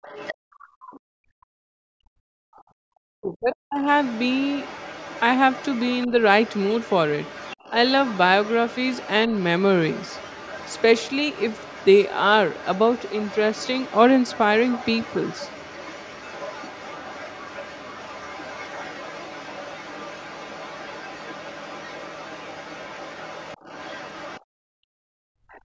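An echo canceller on a loudspeaker call repeatedly mishandles the far end in this speech recording. It likely fails to remove all of the loudspeaker signal, so the other side's voice leaks through from 0.02 to 1.0 s, briefly at 2.54 to 2.62 s, almost continuously from 3.53 to 24.41 s, and again at 25.49 to 25.6 s. The leakage sits roughly 20 dB below the talker, fainter in the short scraps. The canceller also clamps the microphone while the loudspeaker plays, so the background is gated from 0.35 to 2.46 s and from 24.41 s to the end, dropping by up to about 40 dB before the room sound returns. From 2.74 to 3.86 s, both sides talking at once likely confuses it, and the talker's own speech is suppressed in double talk, dipping very deeply for about a second.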